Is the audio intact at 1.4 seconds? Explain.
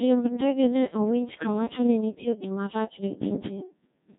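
No. From 1.33 to 1.47 s the speech breaks into warbling, bleepy gibberish, with sudden jumps in pitch, loudness and tone colour. These are bit errors on digital voice radio: flipped bits, roughly one in twenty, corrupted what sounds like a few vocoder frames, each wrongly setting a frame's pitch, level, voicing or spectrum.

Underneath, the whole clip carries the Codec 2 vocoder's robotic, buzzy character, which fits a rate around 1.6 kbit/s. Only pitch, voicing, energy and a spectral envelope survive, and the decoder rebuilds the speech from sine waves, so the original waveform is heavily lost.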